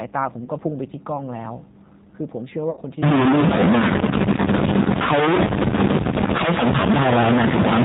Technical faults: G.729 codec; VoIP packet loss concealed by the speech codec; stuck bit

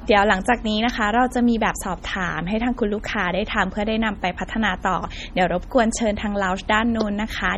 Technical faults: MP3 compression

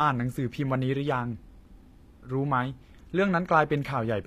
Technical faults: HE-AAC compression

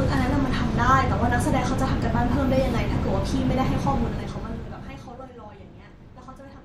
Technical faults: zipper noise

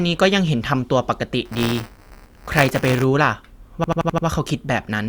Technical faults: buffer tearing; system hang loop

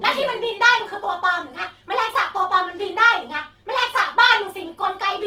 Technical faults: Opus compression

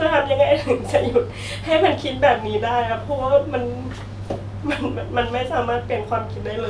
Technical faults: none

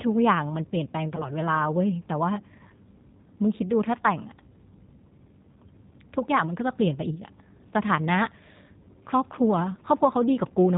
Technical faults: G.729 codec; VoIP packet loss concealed by the speech codec

